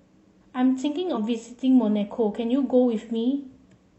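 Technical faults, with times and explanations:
1.12–1.18 s, compressed frames skipped: a frame was missing from the file or rejected by the decoder as damaged, so the speech jumps ahead by about 50 ms, consistent with one 46.4 ms frame.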